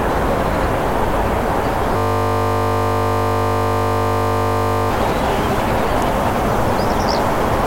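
From 1.97 to 4.91 s, a system hang loop repeats one 20 ms piece of sound. The frozen system leaves a steady 50 Hz buzz.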